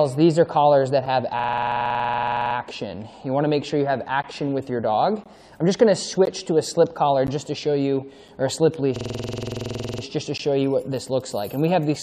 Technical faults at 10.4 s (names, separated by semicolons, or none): gap between stream segments